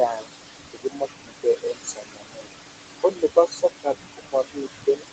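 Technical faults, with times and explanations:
Throughout: noise suppressor artifacts. The suppressor pulls the room noise, which sits only about 6 dB below the speech, down by about 21 dB between phrases and lets it back up under them, so the residue breathes.
0.07–0.30 s, 0.70–1.08 s, 1.25–2.50 s, 2.98–3.87 s, 4.13–4.68 s and 4.86–5.09 s: speech cut by the noise suppressor. Quieter parts of the speech were mistaken for noise and lowered by about 21 to 22 dB, so endings and soft sounds turn swallowed and faint, over roughly a second in the longest stretch.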